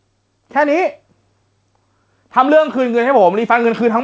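A speech recording with gain pumping running through the whole clip, with the level swinging by around 5 dB. The likely cause is input gain set far too high with a fast limiter or compressor reacting to every peak. On a waveform the envelope looks flattened. A spectrogram shows energy stopping at 8 kHz from the G.722 call path.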